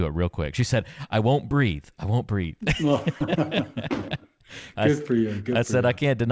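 At 3.21 s a single low thump cuts into the speech, which carries on unchanged through it. This is a DC step: the waveform's zero line jumps abruptly, then the offset drains away through a 20 Hz high-pass, so only the edge is heard.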